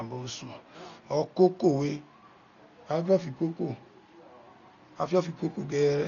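Speech, dull throughout with nothing above 7 kHz and rough, fluttering noise around tones: likely heavy Dolby Digital compression, consistent with a bitrate around 40 kbps.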